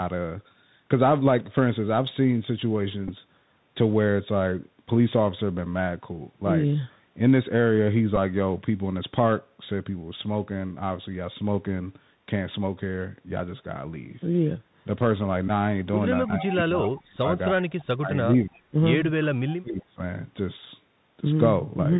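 The whole clip is speech carried over the Bluetooth CVSD headset codec, and the damage is plainly audible. CVSD sends one bit per sample at 64 kHz, just telling the decoder to step up or down, so everything is narrowband with nothing above 4 kHz. Loud bright moments outrun the adaptive step and distort, the s sounds come out scratchy, and there's a grainy hiss sitting under the speech the entire time.

Then come a few Bluetooth headset packet repeats. From 3.08 to 3.11 s, and again at 8.16 s, a lost stretch of about 7.5 ms fits two packets going missing, with the chip decoding the previous packet's bits a second time. At 15.48 to 15.50 s it's about 11 ms, so around three packets. Each is a short run, and the repeat every 3.75 ms makes a brief steady buzz near 267 Hz until good packets return.

From 16.26 to 17.28 s the speech sinks by as much as around 25 dB in patches, adding up to roughly 0.7 s. 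From 17.46 to 18.75 s it drops again, this time by up to about 30 dB over roughly a second. That's speech suppressed in double talk. The likely cause is the far end talking at the same time, with the echo canceller unable to separate its own talker from the loudspeaker echo and pulling everything down.

At 19.48 to 19.55 s a faint delayed copy of the speech slips through, sitting about 20 dB below the main level and trailing by 283 ms. That's an echo leak. It's likely from the other side playing the call on a loudspeaker, with its echo canceller not removing everything its microphone caught, so a scrap came back down the line.

Right after that, from 19.60 to 20.00 s, there's another double-talk suppression dip. The speech falls by around 25 dB over roughly 0.4 s.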